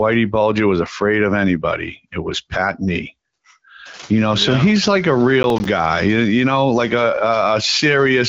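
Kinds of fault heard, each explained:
Processor overload crackle: right after "yeah he's like a", from about 5.43 to 5.65 s, the processor clearly couldn't keep up and missed a run of its audio deadlines, around seven of them in a row. Each miss drops in a short hole of silence with hard edges, and the spacing fits buffers of roughly 10 ms, so you get a quick gritty tearing over the speech that clears once the load eases.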